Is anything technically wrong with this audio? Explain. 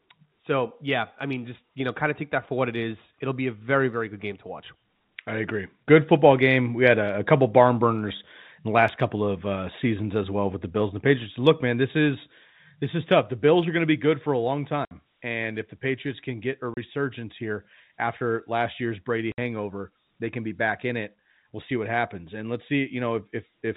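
Yes. The speech has three short holes caused by packet loss filled with silence, at 14.85 to 14.91 s (60 ms), 16.74 to 16.77 s (30 ms) and 19.32 to 19.38 s (60 ms). When audio packets never reached the receiver, it played digital silence in their place rather than concealing the gap. The 30 ms and 60 ms lengths suggest 30 ms packets, with the longer holes fitting two consecutive losses. Each hole cuts the speech off and restarts it abruptly. Beneath the dropouts, the narrow telephone band of G.711 coding is audible, with nothing above 4 kHz.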